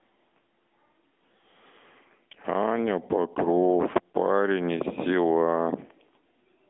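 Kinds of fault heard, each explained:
AMR narrowband mobile codec: the speech is rebuilt by a phone-style vocal-tract model, audibly buzzy and synthetic, which fits a mid-rate mode near 10 kbps. On a spectrogram, nothing appears above 3.8 kHz.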